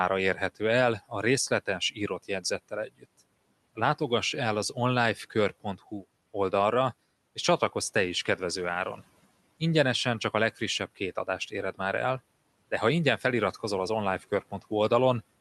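Between 1.5 and 2.1 s, and again from 2.69 to 3.05 s, there's speech cut by the noise suppressor. It misread bits of the quiet speech as the room noise, which sits about 26 dB under the talker, and pulled them down with it. The first dip drops by about 12 dB over roughly a tenth of a second. The second dips by about 18 dB for a bit longer, so the affected speech sounds swallowed.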